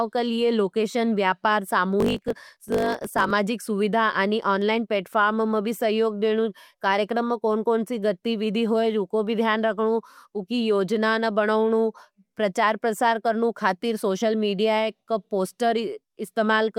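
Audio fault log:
1.98–3.32 s, block size mismatch (truncated): after "लिए लोकैशन व्यापार", one stage writes longer blocks than the next reads, which fits 1024-sample blocks, so each block's tail is dropped, producing a 50 Hz buzz and speech running 1.07 times fast at near-normal pitch.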